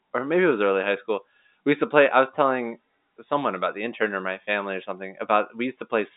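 No technical faults turn up anywhere in the speech, which comes through the ordinary narrow band of G.711 telephone coding.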